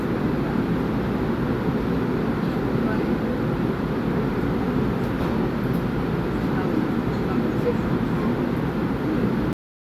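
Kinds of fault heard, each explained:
Cut-off end at 9.53 s: the final stretch of audio was never written out, so the sound halts mid-event and falls straight to digital silence with no natural decay, leaving about 0.32 s of dead air before the recording finishes.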